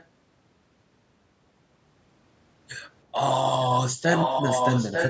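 An echo canceller on the far end likely let its loudspeaker pickup through, an echo leak. A copy delayed by about 0.9 s is faint from 0.00 to 0.06 s, then roughly as loud as the speech from 4.09 s to the end.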